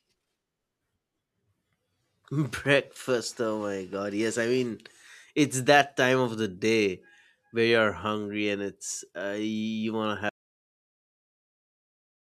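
A speech recording with a cut-off end. At 10.29 s the audio stops in the middle of a sound. It falls straight to digital silence, with no natural decay. The final buffers were never written or played back. The silence runs to the end.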